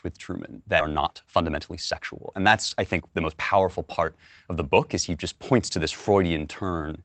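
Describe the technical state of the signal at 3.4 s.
At 3.4 s the speech has just come out of a jitter buffer speed-up running from 0.89 to 3.38 s. The receiver's buffer held too much audio. It cut short pitch-period pieces repeatedly, about a third of a second in all. The sound runs about 12% fast at unchanged pitch and feels hurried, easing just before "powerful part of the".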